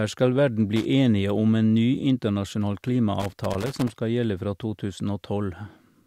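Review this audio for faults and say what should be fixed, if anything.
Irregular bursts of scratchy crackle interrupt the speech from 0.76 to 0.85 s, just after "skal verden", and again for longer from 3.20 to 3.94 s. This is loose connector crackle: a worn or dirty contact is making and breaking as it moves, chopping the signal. Clean or replace the connector and cable, and secure them so they cannot shift during recording.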